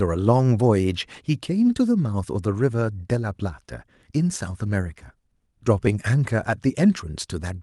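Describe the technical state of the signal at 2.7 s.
At 2.7 s the speech is intact, with no dropout, glitch or distortion, only the ordinary band limit near 12 kHz and coding texture of a call codec path working as designed.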